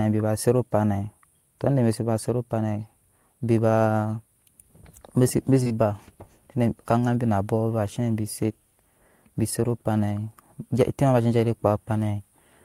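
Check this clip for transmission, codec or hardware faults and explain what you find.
One transmission fault shows up, as two back-to-back short concealed packet losses in this speech, from 5.63 to 5.68 s and from 5.68 to 5.72 s. Each time about 20 ms of audio, which fits a single lost 20 ms frame, failed to reach the decoder, and the receiver extrapolated the preceding sound for roughly 23 to 24 ms before crossfading back. Together they make a brief smeared wobble just under a tenth of a second long.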